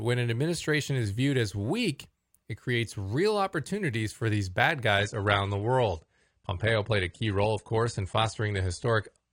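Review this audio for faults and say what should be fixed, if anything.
Adaptive stream at a lower bitrate, from 4.98 s to the end: the speech abruptly loses its top end, with nothing above 10.1 kHz, and codec artefacts thicken with no gap. This fits the player switching from roughly 96 kbit/s AAC to a 32 kbit/s rendition. To prevent this, give the player a larger buffer or a higher minimum bitrate so that a brief slowdown does not force a step down to the low-bitrate rendition.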